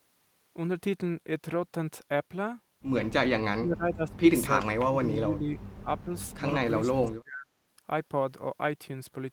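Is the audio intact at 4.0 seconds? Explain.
No. At 4.0 s the clip is inside a stretch of speech suppressed in double talk, running from 3.41 to 4.23 s. The speech level dips sharply, about 35 dB at its deepest, and the attenuation covers most of that span. The likely cause is an echo canceller that could not separate the near talker from loudspeaker echo while both sides spoke, and so turned both down.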